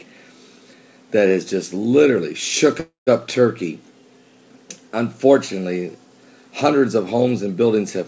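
Audio carried over a call path, with nothing above 8 kHz as G.722 at 64 kbps would give, halts from 2.80 to 3.09 s. This is a call audio freeze, likely from delayed packets draining the jitter buffer. The last sound is stretched into a fading buzz or hiss, then about 140 ms of silence, before playback resumes where it stopped, now 268 ms later, with nothing lost. A spectrogram shows the final frame's bands smeared flat, then blank. The waveform shows a decaying tail into a flat gap.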